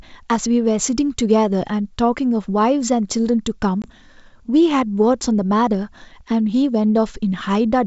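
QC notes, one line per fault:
3.82–3.90 s packet loss on an ADPCM call: hard-edged 20 ms silence, about one packet, then slightly distorted speech while the decoder's predictor and step size resettle, unlike a clean dropout.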